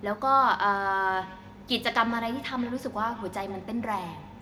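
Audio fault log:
1.14 s to the end, feedback echo between two devices: each phrase of the speech returns at a steady interval of roughly 150 ms, peaking at about 19 dB below the speech, thinner and ringier on every pass, as a second device in the room replays the call and the other device's microphone resends it past that device's echo canceller.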